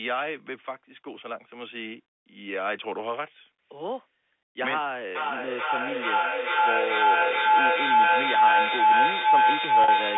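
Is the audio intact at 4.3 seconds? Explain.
Yes, the speech at 4.3 seconds is intact, with no fault at that moment.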